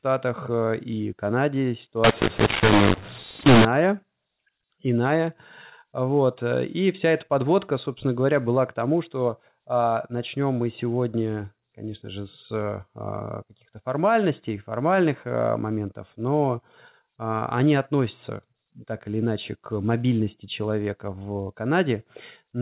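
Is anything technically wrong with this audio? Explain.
Yes. From 2.04 to 3.65 s, mu-law and A-law are mixed up. A-law telephone samples are decoded as mu-law, scrambling levels. The speech turns harsh, and pauses fill with noise.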